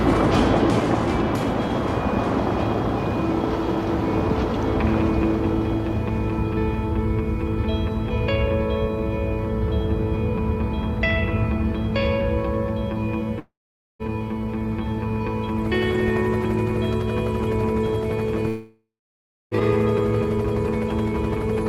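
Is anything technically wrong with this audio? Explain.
Yes. There are two gaps, at 13.39 to 14.02 s and at 18.48 to 19.54 s. Each starts as a fading buzz, then goes quiet for about 0.47 s and 0.64 s, and the sound resumes with material missing. This is likely a long network dropout. The receiver got nothing for roughly 0.6 s and 1 s, stretched the last sound briefly, then gave up. On a spectrogram it looks like a smeared, decaying band followed by an empty column. The waveform collapses to near-flat.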